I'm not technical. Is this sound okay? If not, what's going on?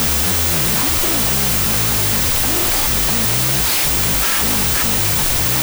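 No. From start to finish, the speech is buried under loud, harsh noise. What comes through is dragged out at half speed, so it sounds about an octave too low. This is a wrong sample width fault. The player is cutting the audio into smaller pieces than it was saved in, which fits 32-bit floating-point samples being read as 16-bit whole numbers. Most pieces turn into noise, and each real sample fills two slots, halving the speed.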